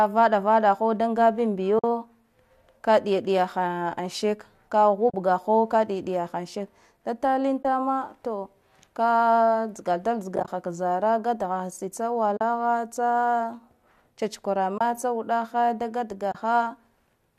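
Speech carried over a low-delay AAC link, likely AAC-ELD, has brief soft-edged holes from AAC frame loss with muting at 1.79–1.84 s (50 ms), 5.10–5.14 s (40 ms), 7.63–7.65 s (20 ms), 10.36–10.48 s (several short gaps scattered over 120 ms), 12.37–12.41 s (40 ms), 14.78–14.81 s (30 ms) and 16.32–16.35 s (30 ms). Each gap length fits whole 10 ms frames being zeroed by the decoder. The overlapping windows fade the sound out and back in, which sets them apart from a hard sample dropout.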